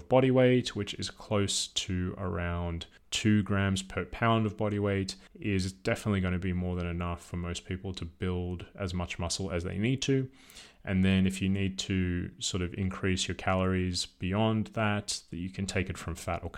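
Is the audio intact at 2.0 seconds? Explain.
Yes, the audio is intact at 2.0 seconds, with no audible fault at that moment.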